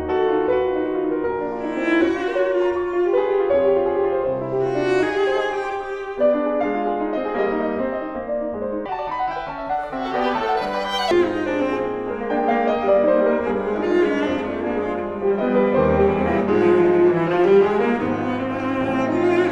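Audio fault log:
8.86–11.11 s, section at the wrong speed: for about two and a quarter seconds the sound rushes along at 1.89 times its proper rate, and because speed and pitch are tied together it also jumps up by roughly ten semitones, so everything turns thin, chipmunky and hurried before snapping back to normal. That coupled lift in tempo and pitch is the giveaway; the likely cause is that stretch being played back against the wrong clock, as if an editor or player misread its rate.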